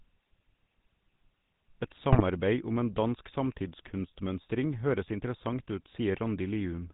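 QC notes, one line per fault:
Throughout, GSM full-rate codec: The speech passes through a vocal-tract model driven by a sparse, regularly spaced pulse excitation, which fits the 13 kbit/s full-rate coder, and nothing survives above 4 kHz. The voice is plainly buzzy and gravelly, with a dull, band-limited top.
2.12–2.22 s, GSM bit errors: Just before "om en", corrupted bits reach the decoder and scramble the filter, pitch and gain values for a stretch that fits about four 20 ms frames, pointing to an error rate near 2.4%. The voice briefly squawks and gargles with a distorted spectrum and jumping level.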